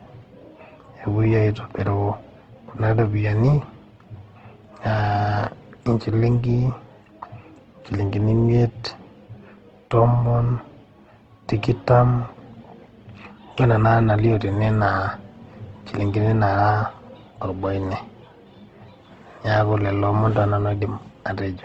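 Throughout, the speech carries layered codec artefacts, likely from transcoding between lossy codecs, fitting low-rate Opus then HE-AAC. A spectrogram shows a hard ceiling at 11.1 kHz and smeared, patchy upper bands.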